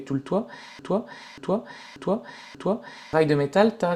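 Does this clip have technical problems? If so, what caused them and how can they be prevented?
Yes. From 0.79 to 3.13 s there's a broken-record loop: a 0.59 s slice of the speech plays four times back to back, identical on each pass, and whatever should have been heard during that stretch is gone. The likely cause is the player, encoder or stream stalling and resending the last chunk it had. To prevent it, catch stalls and buffer underruns, and have the player output silence instead of replaying stale data when input stops arriving.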